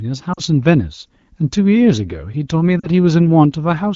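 At 0.33 to 0.40 s and again at 2.79 to 2.88 s there are lost AMR speech frames. About 40 ms of speech goes missing each time, which fits two 20 ms frames failing their check. The decoder covers the gap by repeating the last good pitch and vocal tract shape at falling level. Each gap sounds like the voice fading to near silence within the two frames. The speech then returns weak or rough for a moment. Around the gaps, the wideband coding sounds clear, which fits a rate near 12.65 kbit/s.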